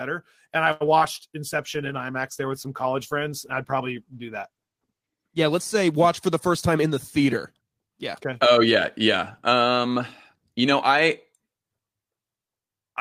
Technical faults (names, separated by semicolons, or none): short stall from a late packet; short concealed packet loss; call bitrate drop; jitter buffer speed-up